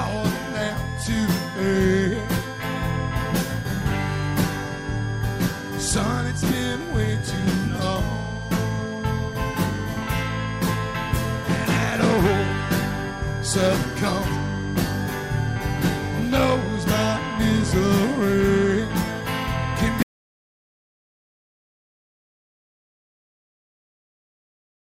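A switching supply whistle runs through the whole recording: a thin tone wandering between 1.5 and 1.7 kHz, roughly 15 dB below the programme. Its drifting pitch sets it apart from steady mains hum. At 20.03 s the audio drops out to silence and stays silent to the end. It is plain silence with no room tone, unlike a fade or noise gate, and likely comes from a lost input link.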